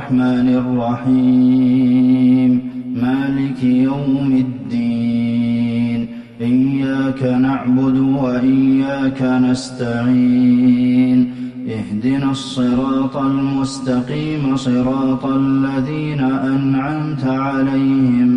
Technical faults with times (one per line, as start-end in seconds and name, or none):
none